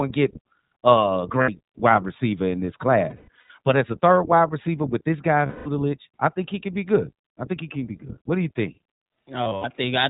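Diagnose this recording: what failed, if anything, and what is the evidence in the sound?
Codec stage: iLBC codec damage throughout. Nothing above 4 kHz survives, and the speech sounds rough and synthetic. It is coded at 15.2 kbps in 20 ms frames.

Network stage: lost iLBC frames at 1.42–1.50, 3.10–3.50, 5.46–5.68 s (before "I think he can") and 9.44–9.66 s. The decoder repeats the last pitch cycle with noise, giving a buzzy held vowel. The speech then recovers at once.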